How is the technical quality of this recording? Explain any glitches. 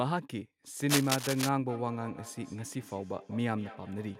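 Two faults get in the way of the speech, one short and one running to the end.

From 0.89 to 1.49 s there's a burst of cable scratch noise: dense, ragged crackling and rustling that sits roughly as loud as the speech itself. It's likely a worn cable, connector or control being moved, so the contact resistance jumps around quickly and dumps uneven bursts of noise straight into the signal. For about six-tenths of a second it scratches right over the top.

From 1.69 s to the end there's feedback echo between two devices. The speech keeps coming back roughly every fifth of a second, each return thinner and more ringing, peaking at about 18 dB below the speech. That's what you get when two devices share a room on one call: one plays what the other's microphone sent, and that microphone picks it up again. Each echo canceller only removes its own device's playback, so the loop goes around.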